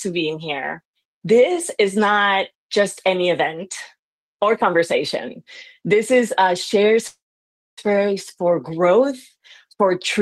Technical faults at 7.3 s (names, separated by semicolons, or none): call audio freeze